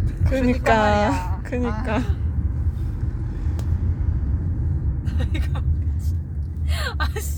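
The signal carries no audible technical faults anywhere in its run, with nothing in the audio path disturbing the recorded sound.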